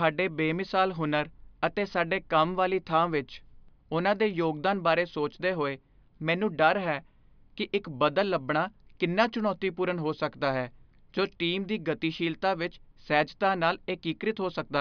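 No technical faults can be heard anywhere in the speech recording. There is nothing to mark at any point in the audio.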